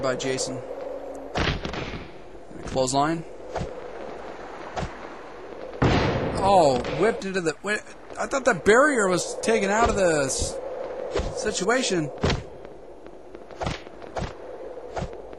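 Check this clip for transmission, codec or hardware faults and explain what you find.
One fault stands out, early in the clip. From 0.69 to 1.36 s the audio suddenly runs about 5% fast and rises nearly a semitone (88 cents). The cause is likely a drift correction step, where clock-matching software jumped the playback rate to rebalance its buffer. Unlike wow or flutter, which wobble continuously, the shift holds steady and then snaps back.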